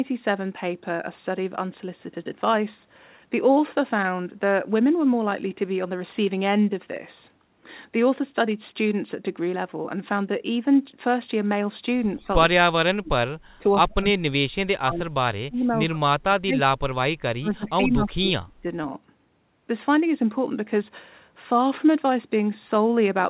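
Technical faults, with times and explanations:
12.15–12.27 s and 12.48–18.67 s, speech suppressed in double talk: a slight dip, then chopped drops of about 35 dB, likely the echo canceller muting overlapping talk. The waveform shows hollowed gaps and the spectrogram shows blank patches.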